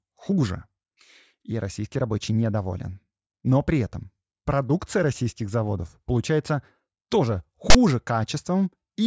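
A sudden, hard-edged burst of harsh rasp cuts into the speech from 7.70 to 7.75 s, lopsided rather than centred like ordinary noise. This is file tags played as audio: a block of text metadata was decoded as though it were samples, producing that skewed static.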